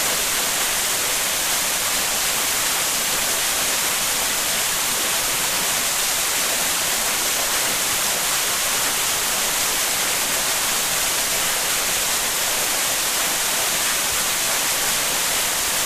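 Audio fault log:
0.89–14.91 s, periodic USB or driver dropouts: a tick recurs exactly once a second, around fifteen in all, each a gap of roughly a millisecond filled with silence. The even spacing points to a background task repeatedly stalling the USB bus or audio driver.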